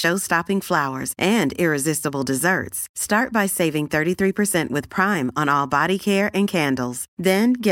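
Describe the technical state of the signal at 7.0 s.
At 7.0 s the speech signal is intact, with no audible fault at that moment.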